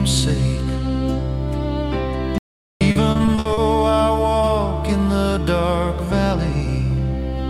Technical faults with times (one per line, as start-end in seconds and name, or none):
2.38-2.81 audio dropout to silence
2.91-3.59 repeated packet loss (robotic sound)